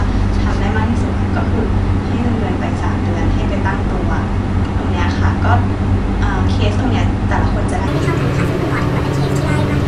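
From 7.88 s to the end, a wrong sample rate: audio recorded at 22 kHz plays at 32 kHz, so the speech rushes about 1.45 times faster and jumps roughly 6.5 semitones higher.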